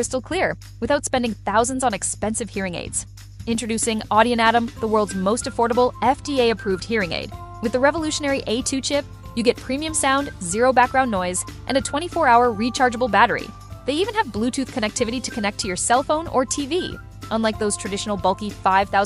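From start to finish, a ground loop or nearby transformer couples the 50 Hz power line into the signal: mains hum, a steady low drone roughly 20 dB below the sound.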